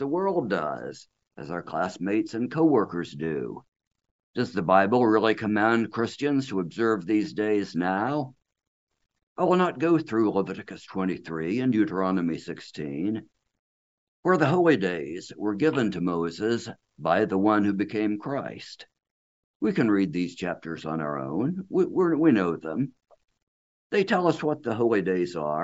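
No technical faults are audible.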